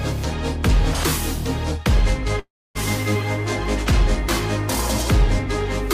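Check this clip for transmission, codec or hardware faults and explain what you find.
There's one clear problem: a long network dropout from about 2.39 s to 2.77 s. Right there the sound stops being real and the receiver starts papering over the gap, stretching out the last bit it had into a fading buzz that soon settles into near silence. That pattern likely comes from packets not arriving for over a third of a second, and when the audio resumes, roughly 360 ms of material is simply gone.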